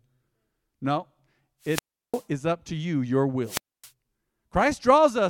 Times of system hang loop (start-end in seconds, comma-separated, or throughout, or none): none